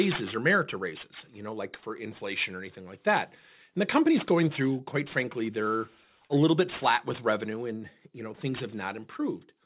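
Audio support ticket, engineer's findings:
Aliasing, throughout. Sibilants gritty and metallic, spectrum packed hard up to a 4 kHz edge, which fits a rate drop from 44.1 kHz to 8 kHz. Probable component: resampler with no anti-alias filter, so content above 4 kHz folds back into the band as unrelated tones, fairly strong, around 15 dB below the speech. Unlike a plain low-pass or band-limited telephone path, energy isn't lost but mirrored inward, adding false, inharmonic hiss rather than dulling.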